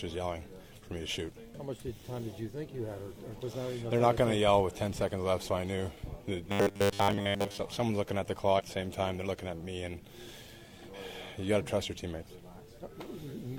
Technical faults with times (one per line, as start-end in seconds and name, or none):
3.35-3.39 compressed frames skipped
6.48-7.60 robotic sound from repeated short buffers
8.55-8.61 compressed frames skipped